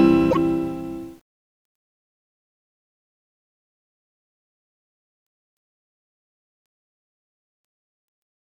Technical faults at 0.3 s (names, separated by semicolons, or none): broken MP3 bit reservoir